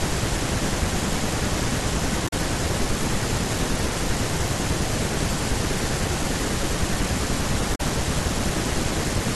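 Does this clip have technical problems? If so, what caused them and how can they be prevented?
Yes. The speech has two short bursts of damaged data in a compressed stream, from 2.25 to 2.33 s and from 7.72 to 7.81 s, each lasting about 90 ms and heard as a brief chirp or blip. Corrupted bytes in the encoded file made the decoder misread those frames and lose sync until it found a valid frame header again. Checksummed storage and transfer, with error detection on the stream, would prevent this.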